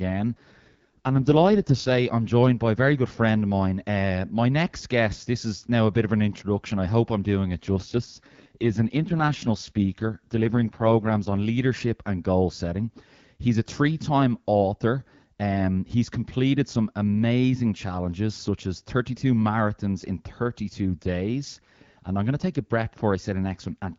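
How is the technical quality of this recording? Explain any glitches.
The recording is a wideband phone call, and the line quality dips twice. An AMR rate drop occurs from 0.36 to 1.98 s, before "I'm joined by a", and from 7.63 to 11.41 s, between "hope I'm doing it" and "leadership and goal setting". The codec steps down to fewer bits, roughly consistent with a fall from 12.65 to 6.6 kbit/s, so the speech turns rough and synthetic. Unlike dropouts or band narrowing, the audio stays continuous and keeps the same wideband range.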